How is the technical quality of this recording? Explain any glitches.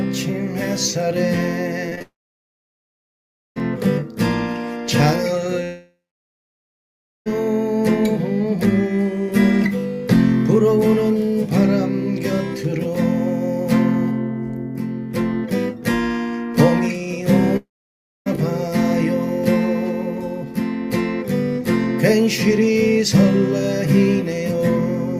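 The recording has clear network faults: a brief choppy patch followed by three stretches where the audio cuts out.

From 1.89 to 2.02 s the sound turns choppy, with pieces missing. This is repeated packet loss. Three short gaps, the longest 18 ms, were each patched by extending the preceding sound, so about 37% of that span is filled in rather than real.

At 2.02–3.58 s, 5.64–7.28 s and 17.57–18.28 s, a fading buzz or hiss gives way to silence lasting about 1.5 s, 1.3 s and 0.6 s. This is a long network dropout, likely from audio failing to arrive. The receiver stretched the last sound, and the missing portion never returns.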